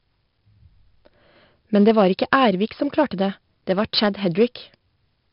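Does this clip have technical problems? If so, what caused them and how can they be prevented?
Yes. 4-bit ADPCM compression throughout: each sample is a coarse adaptive step from a prediction, leaving heavy gritty hiss on loud speech, crunchy attacks, and nothing above 5.3 kHz. To prevent it, record and export in a lossless or modern codec at a full sample rate instead of ADPCM.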